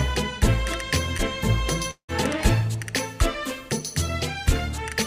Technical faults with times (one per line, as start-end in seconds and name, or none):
1.17-1.21 short concealed packet loss
1.91-2.10 long network dropout